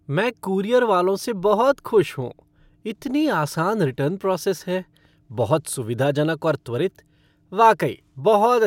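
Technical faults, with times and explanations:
No technical faults can be heard in this recording.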